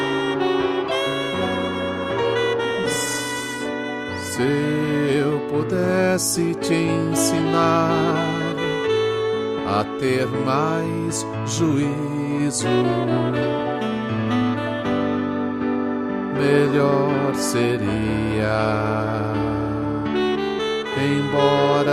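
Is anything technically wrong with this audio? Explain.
No, nothing technically wrong can be heard here.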